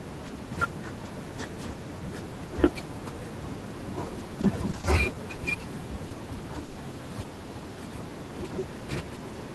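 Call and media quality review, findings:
Repeated packet loss (robotic sound), 4.41–5.41 s: choppy stretch with pieces missing. Four gaps, longest 40 ms, roughly a tenth of the span patched. Jitter buffer concealment kept extending the last sound, about 70 ms rebuilt in all, before the next hole arrived.

Short concealed packet loss, 6.09–6.13 s: brief smear over a 20 ms hole. Decoder concealment continued the preceding sound from its pitch or as shaped noise, then crossfaded back into the real audio; a short consonant may drop out.

Burst of packet loss, 6.65–6.79 s: 120 ms missing, no silence. Receiver continued the last sound and faded it as the gap lengthened, giving a held buzz or fading hiss; playback resumes further on with that segment gone. Opus coding noise throughout, bandwidth capped near 12 kHz, consistent with roughly 24 kbps.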